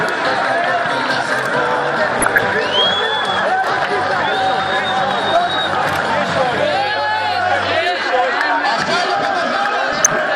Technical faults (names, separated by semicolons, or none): DAB burbling